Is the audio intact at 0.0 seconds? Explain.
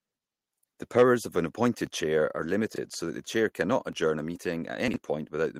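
Yes, the audio is intact at 0.0 seconds, with no fault present at that moment.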